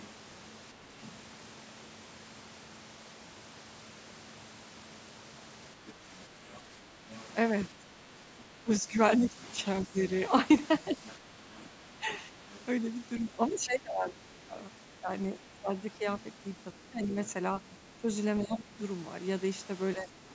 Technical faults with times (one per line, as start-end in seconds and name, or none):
0.00-0.08 other side's voice leaking through
1.04-1.12 other side's voice leaking through
5.80-9.99 speech suppressed in double talk
5.87-7.23 other side's voice leaking through
9.25-12.60 other side's voice leaking through
10.91-18.77 speech suppressed in double talk
16.19-18.46 other side's voice leaking through
19.96-20.35 speech suppressed in double talk